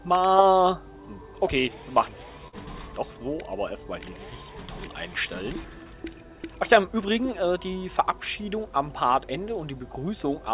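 Around 2.48 s there's a burst of packet loss lasting until about 2.55 s, heard through an audio path that tops out at 4 kHz, which fits a narrowband G.711-style call codec. At the dropout, the receiver stretches the last bit of sound for roughly 47 ms, fading it into a brief buzz or hiss. About 40 ms of the real audio never arrives, so playback picks up slightly further along with a small jump where that stretch went missing.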